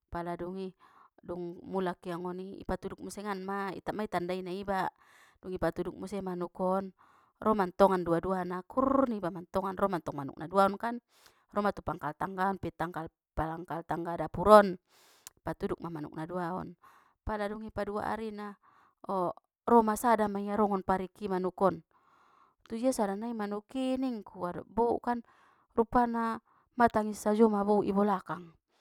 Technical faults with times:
none

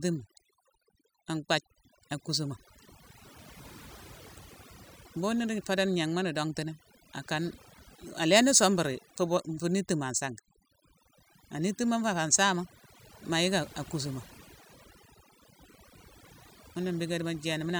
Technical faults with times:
0.00-17.79 overdone noise removal

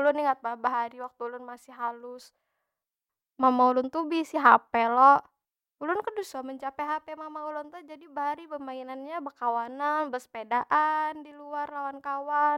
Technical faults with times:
none

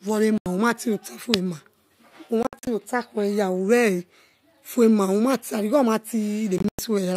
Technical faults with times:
0.38-0.46 Bluetooth dropout
2.43-2.67 Bluetooth dropout
6.58-6.79 Bluetooth dropout

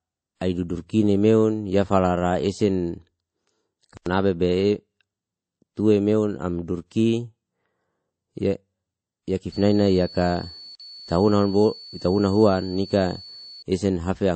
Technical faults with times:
0.00-14.36 transcoding between lossy codecs
3.97-4.06 block of digital silence
9.52-13.63 switching supply whistle
10.75-10.80 block of digital silence

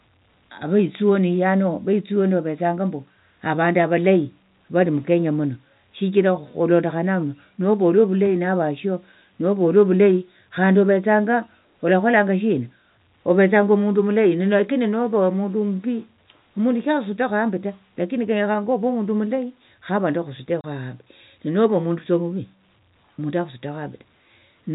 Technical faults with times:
20.61-20.64 packet loss filled with silence

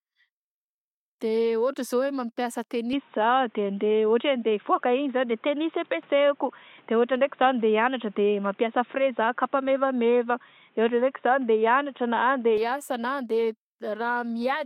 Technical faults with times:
2.93-12.57 input switched to a poorer device

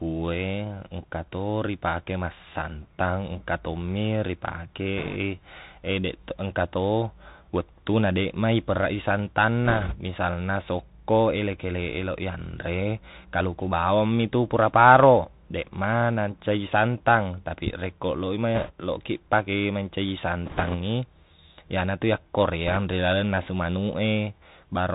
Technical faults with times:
0.00-24.95 Bluetooth CVSD headset codec
4.98-5.16 bit errors on a Bluetooth voice link
9.65-9.96 bit errors on a Bluetooth voice link
18.55-18.71 bit errors on a Bluetooth voice link
20.46-20.75 bit errors on a Bluetooth voice link
22.67-22.77 bit errors on a Bluetooth voice link

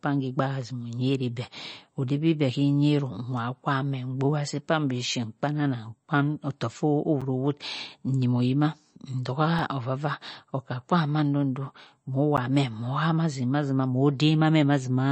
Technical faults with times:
0.00-15.12 MP3 compression
7.21 block of digital silence
9.59 block of digital silence
12.37 block of digital silence

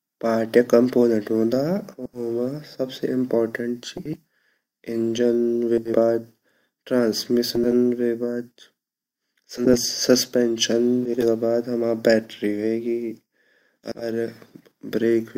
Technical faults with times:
1.97-2.20 frames out of order
3.97-4.17 frames out of order
5.78-5.98 frames out of order
7.55-7.73 frames out of order
9.57-9.78 frames out of order
11.05-11.25 frames out of order
13.84-14.05 frames out of order

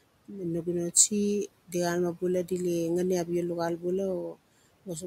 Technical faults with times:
0.00-5.06 noise suppressor artifacts
4.29-4.38 speech cut by the noise suppressor

